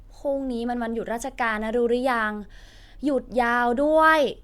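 Nothing technical stands out in this bit of speech; there's no fault here to point to.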